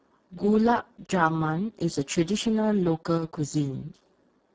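A speech recording passed through the Speex codec at a very low setting, consistent with roughly 6 kbps, leaving too few bits for the excitation, so the voice sounds heavily hoarse, noisy and robotic throughout. From 3.17 to 3.22 s the level drops abruptly by about 6 dB for 50 ms, most likely because one stereo channel dropped out before the mono sum.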